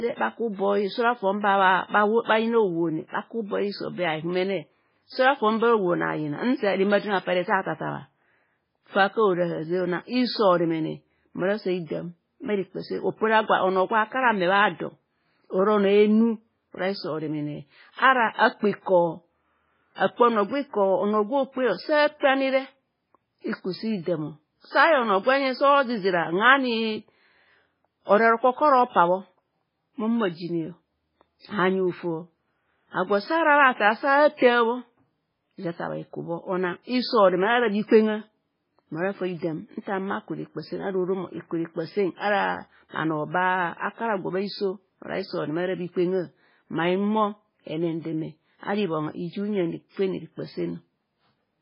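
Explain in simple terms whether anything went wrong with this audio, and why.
MP3 compression, heavy, throughout the clip: nothing above 5.3 kHz survives, so the speech sounds dull and watery, likely from squeezing it into too few bits.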